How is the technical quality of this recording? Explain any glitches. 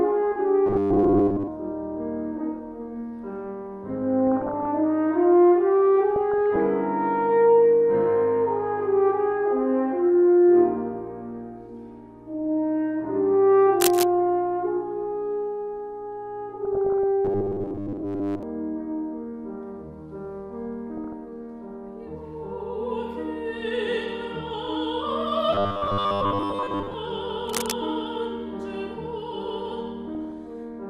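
The recording has three recurring kinds of glitch, spread through the whole clip.

Robotic sound from repeated short buffers appears from 0.67 to 1.49 s, 17.25 to 18.43 s, and 25.53 to 26.95 s. The sound turns rigid and metallic, with a steady buzz at 100 Hz. The likely cause is audio arriving too seldom. The playback then loops the last short slice to fill the gap. A 100 Hz buzz fits a slice of about 10 ms. Most of the real audio in these stretches is skipped.

DAB burbling occurs at 4.27 to 4.66 s, 6.16 to 6.56 s, 16.65 to 17.04 s, 20.93 to 21.13 s, and 30.01 to 30.38 s. Weak reception lets a small share of bit errors slip past error correction into the coded audio. Wrong samples put short blips of noise in single frequency bands, and wrong scale factors make bands jump in level for up to a frame. The result is a burbling of noise blips laid over the sound.

Cable scratch noise is heard at 13.80 to 14.04 s and 27.48 to 27.72 s. 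Each is a brief burst of dense, uneven scratching and rustling. It is loud, only a little below the level of the sound itself. The likely cause is a worn cable, connector or control being moved. Its contact resistance then fluctuates rapidly and injects noise into the signal.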